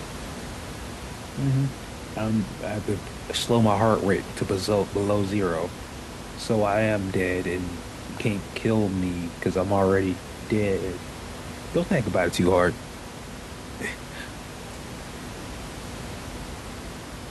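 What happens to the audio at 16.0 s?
At 16.0 s the speech comes through intact, with only the ordinary background noise of the room sitting about 13 dB below it.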